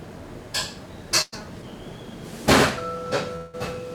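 At 1.21 s a burst of packet loss interrupts the sound until 1.34 s. A short run of audio never arrived in time, so the receiver stretched the last fragment it had, letting it fade over about 110 ms instead of going quiet. When the sound returns, about 100 ms of it has been skipped. What marks this as a burst rather than a dropout is its brevity: the concealed tail never decays into silence before the audio picks up again.

From 3.36 s to 3.55 s the sound again gives way to a continuation of its own last moment that fades for about 170 ms, then resumes roughly 160 ms further on, with that stretch missing. This is likely a long network dropout rather than another short burst: the concealment runs noticeably longer and the skipped portion is larger, though here the fill still never settles into full silence before the audio comes back.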